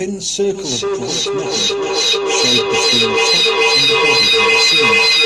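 Right from the start there's mains hum under everything: a steady 60 Hz tone, sitting roughly 15 dB below the speech. It's the power line leaking into the signal, most likely through a ground loop or a transformer sitting near the gear, and it comes across as a constant low drone that never lets up, even in the gaps.

At 0.54 s a feedback echo between two devices kicks in and runs to the end. Two devices on the same call in one room are feeding each other: one plays back what the other's mic sent, that mic hears it again, and neither echo canceller touches the other device's output. You get the speech coming round about every 400 ms, each pass thinner and more metallic. Here the loop is hot enough that the repeats stack up instead of fading, peaking about 9 dB louder than the speech itself.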